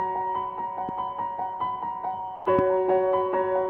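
The audio carries two loud pops and one short dropout. The first pop runs from 0.89 to 0.91 s and peaks around 10 dB above the surrounding sound. The second, from 2.59 to 2.61 s, is harder, peaking around 15 dB above it. Each is a single sharp hit, and the sound continues underneath. The likely cause is a sudden voltage pulse entering the signal chain. A plug, a switch, static discharge or a driver glitch could produce one. Between 2.35 and 2.45 s there is sound dropped by the voice detector. For 100 ms the audio gives way to steady filler noise, then returns. About 60 ms of real sound goes missing in that gap. This likely comes from the sender's detector mistaking the sound for background and pausing transmission. The receiver then plays comfort noise in its place. That behaviour fits Opus discontinuous transmission.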